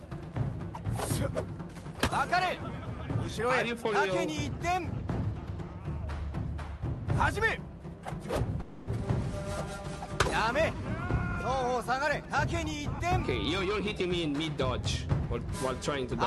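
At 8.61 s the sound smears into a buzzy, fading continuation until 8.89 s, then resumes with about 0.26 s missing. This is likely a long network dropout that concealment covers entirely, so unlike a hard cut-out there is no silent gap, only a synthetic tail.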